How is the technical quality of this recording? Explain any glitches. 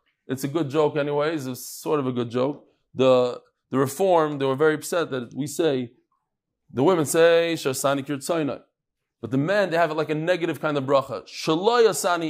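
Nothing in the recording stood out as a technical problem on listening.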